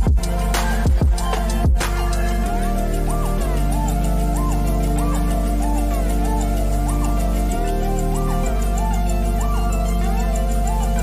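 Nothing in the audio stood out as a technical fault on listening.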